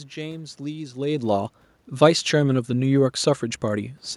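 Nothing technical goes wrong in this speech recording: the background noise is just the room the microphone sits in, and the change in level around a second in is the talker shifting position relative to the mic.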